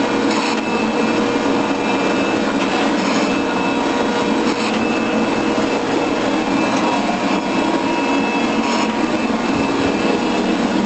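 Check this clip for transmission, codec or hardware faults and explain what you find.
Nothing stood out on listening.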